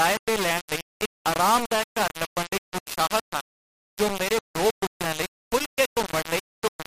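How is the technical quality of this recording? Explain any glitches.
Quality is poor throughout. Low bit depth without dither runs the full length of the speech. The likely cause is rounding to about 3 bits with no dither. The error tracks the signal, so it sounds like harsh, grainy distortion nearly as loud as the speech itself. Quiet syllables turn gritty or sputter.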